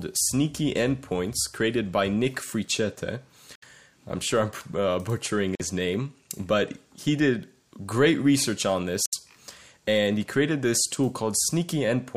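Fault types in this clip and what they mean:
Bluetooth dropout: three silent gaps of 46 to 70 ms, likely lost Bluetooth packets, seen as blank vertical bands and flat waveform stretches.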